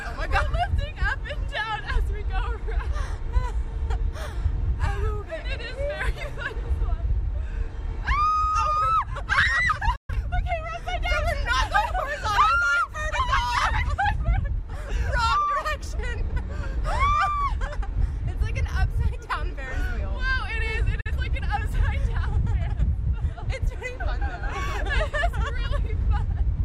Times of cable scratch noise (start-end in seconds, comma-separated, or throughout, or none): none